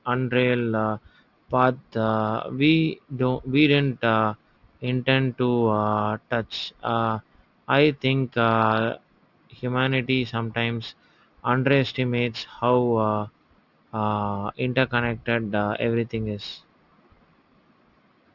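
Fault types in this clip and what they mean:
Aliasing: energy above 6 kHz folds back as faint, unrelated tones, fitting a drop to a 12 kHz rate; sibilants turn gritty rather than simply dull.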